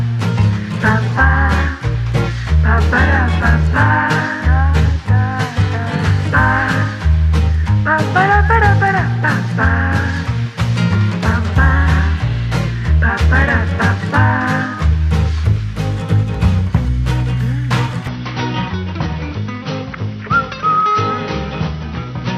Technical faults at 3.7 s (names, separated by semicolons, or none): none